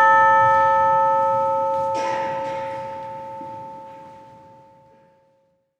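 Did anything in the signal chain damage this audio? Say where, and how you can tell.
No, nothing along the chain has audibly damaged this recording of everyday sound, and the signal holds steady and intact throughout.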